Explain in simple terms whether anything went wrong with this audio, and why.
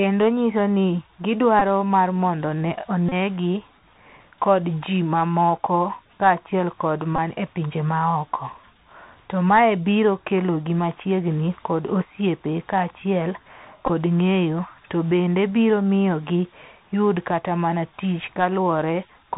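Two things went wrong here. The whole recording went through a Bluetooth CVSD headset codec, the narrowband phone-headset kind. It cuts everything above 4 kHz, so the speech sounds muffled and boxy, with scratchy s sounds and a fine grainy hiss underneath.

There are also four short spots where a Bluetooth headset packet was repeated: the link dropped audio and replayed the last chunk, which comes out as a brief buzzy glitch. They're at 1.59 to 1.62 s, 3.09 to 3.13 s, 7.16 to 7.18 s, and 13.86 to 13.90 s. The last one is scattered rather than one solid run.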